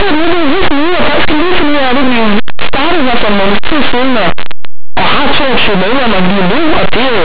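Linear audio read as companded runs throughout the speech: plain 8-bit linear samples are being expanded as mu-law codes, so values just on one side of zero jump to the largest outputs while those on the other side stay small, giving harsh, constant distortion over the sound.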